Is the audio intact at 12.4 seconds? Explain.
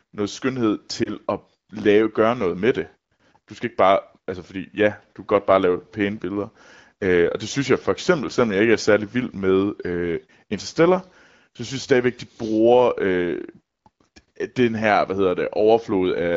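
Yes, the audio is intact at 12.4 seconds, with no fault at that moment beyond the light coding character of the AMR wideband (HD Voice) codec running at 15.85 kbit/s.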